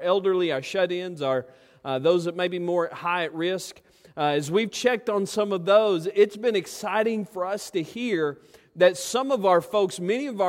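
No technical faults can be heard anywhere in the audio. Nothing in it calls for a time mark or a closer listen.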